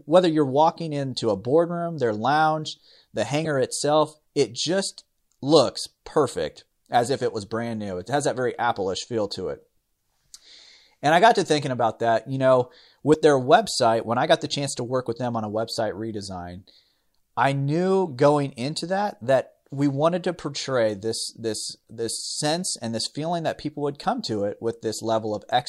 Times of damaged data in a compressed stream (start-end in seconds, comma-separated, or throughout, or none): 3.41-3.47, 13.10-13.15